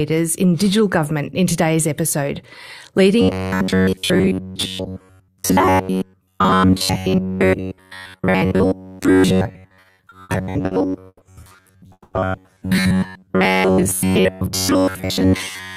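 From 3.21 s to the end, new audio likely arrived too seldom, so most of the sound is replaced by repeats of a short buffer. This robotic sound from repeated short buffers is a rigid metallic buzz at 93.8 Hz, which fits a buffer of about 10.7 ms.

Between 9.67 and 11.22 s, packets kept arriving late and the jitter buffer ran empty seven times. The receiver filled 320 ms in total, the longest wait 120 ms, so the speech drags in a repeated stall, or stutter, with nothing lost.

From 11.92 to 12.14 s, packets were likely held up in transit. The call audio freeze stretches 190 ms of filler, the last 40 ms silent, before the speech resumes where it stopped.

From 14.10 to 15.32 s, a jitter buffer speed-up trims roughly 150 ms of pitch periods to cut the built-up delay. The speech runs at 112% with unchanged pitch and sounds hurried.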